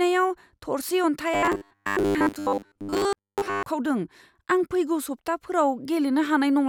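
Robotic sound from repeated short buffers runs from 1.34 to 3.63 s in this speech clip, a rigid metallic buzz at 100 Hz. New audio likely arrived too seldom, so a 10 ms stretch was replayed over and over, replacing most of the real signal.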